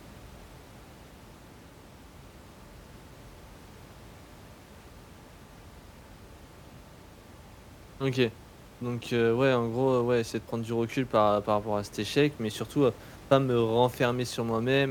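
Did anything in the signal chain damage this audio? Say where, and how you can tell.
No, nothing in the chain seems to have harmed this speech, and the room noise sitting about 23 dB under the voice comes from the space the microphone was in rather than from any equipment along the way.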